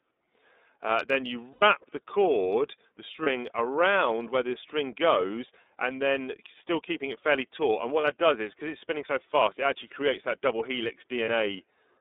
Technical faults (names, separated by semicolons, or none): iLBC codec; lost iLBC frames